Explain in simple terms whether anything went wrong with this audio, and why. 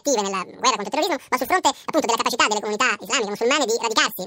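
Yes, something went wrong throughout the clip. The speech plays at twice its proper speed and sounds an octave higher. This is audio read two samples at a time (double speed). The player grabbed pairs of samples as single steps, so everything rushes by.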